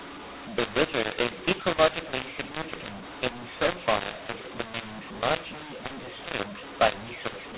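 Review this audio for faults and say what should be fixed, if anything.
Throughout, mu-law and A-law are mixed up: mu-law G.711 bytes are decoded as A-law, scrambling levels so the speech turns harsh and pauses fill with noise. To prevent it, pass the G.711 law explicitly with the audio and check that the encoder and decoder agree.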